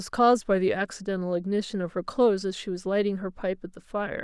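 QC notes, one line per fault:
No faults found.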